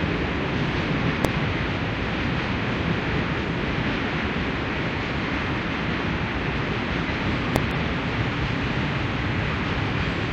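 At 1.25 s and again at 7.56 s there is a single sharp bang: invalid numbers at full scale. A calculation produced infinite or invalid values, which were clamped to maximum amplitude for about 0.73 ms, which fits a 32-sample block. The burst is too short to separate into two clicks. Shortly after each bang, at 1.40–1.44 s and at 7.71 s, there is a brief squawk or blip from damaged data in a compressed stream. The decoder misread corrupted frames, lost sync and jumped ahead to the next valid frame header.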